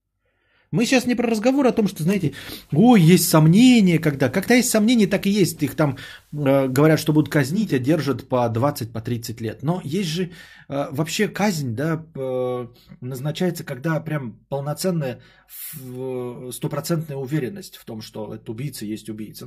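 From 2.03 s to 7.77 s the speech takes on a layer of hiss sitting roughly 40 dB below it, and the level shifts by about 3 dB. This is digital radio blending to analogue: the receiver lost its digital stream and cross-faded over 444 ms to the station's FM broadcast, then returned.

From 12.17 s to the end the speech turns hollow and phasey, with fixed notches starting around 100 Hz and repeating at even steps up the spectrum. This is channel delay (comb filtering): one channel lags by roughly 5 ms, and summing to mono cancels the shared content at those frequencies.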